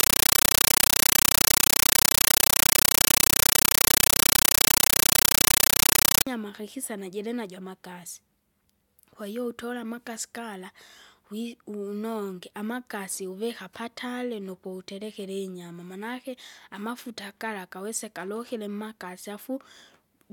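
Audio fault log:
0.00–6.27 s, compressed stream played as audio: very loud chattering static, 9.3 ms noise bursts 31 times a second, from an undecoded AC-3 bitstream output as samples, ending before "kakisa najilinajo amakasi".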